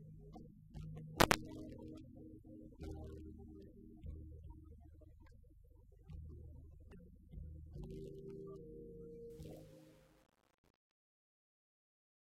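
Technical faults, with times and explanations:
9.30–12.23 s, truncation distortion on a fade: The fade-out, which starts around 9.3 s and runs to 12.2 s, has its gain reduced without dither, and the result is held at a short word length, which fits about 10 bits. As the level drops toward the smallest step, the waveform collapses into a few coarse square steps. The tail turns gritty instead of decaying cleanly, with the roughness at its worst across the whole fade.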